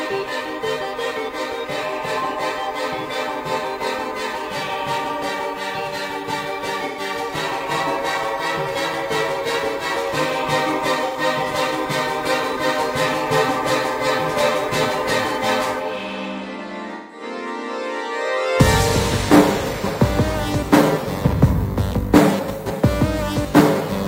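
AAC frame loss with concealment occurs at 6.88 to 6.99 s, 11.06 to 11.17 s, and 16.95 to 17.23 s. The decoder rebuilds the missing audio from the last good spectrum, leaving brief smeared, noisy patches of 85 ms and then 170 ms.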